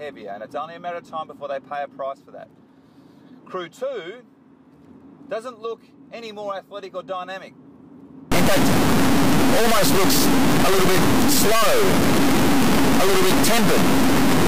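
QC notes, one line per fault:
8.32–14.48 s, integer read as float: from 8.32 s to the end, the sound becomes an extremely loud, buzzing square wave that drops to silence in very quiet passages. This fits 32-bit integer samples being read as 32-bit float, so values land near zero or far beyond full scale and slam against the clipping limit.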